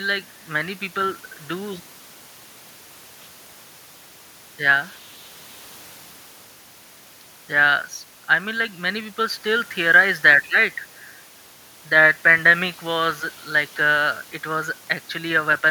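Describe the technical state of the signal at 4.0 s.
At 4.0 s the speech signal is intact, with only the room's own background noise sitting about 25 dB below the voice.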